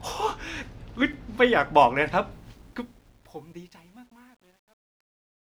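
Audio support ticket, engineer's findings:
Block of digital silence at 1.13 s. Sharp tick as the speech drops to zero and returns with no fade. Gap about 5.8 ms, which fits a 256-sample buffer. Probable cause: audio callback missing its deadline, output buffer left unfilled.

Truncation distortion on a fade, 2.31 s to the end. The fade-out starts around 2.31 s. The quiet tail turns gritty, worst from 3.02 s. Gain stage likely keeping about 10 bits, with no dither.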